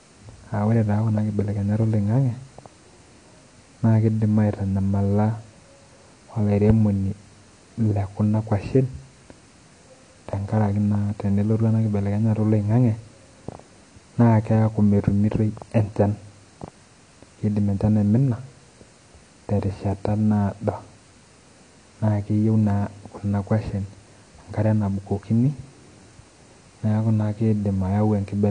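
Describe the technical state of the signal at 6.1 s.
At 6.1 s the speech carries plainly audible AAC compression, present across the whole clip. Nothing reaches above about 9.8 kHz. Sibilants sound dull, smeared and fizzy. The likely cause is an encoder removing upper bands to save data, which fits roughly 32 kbps AAC-LC.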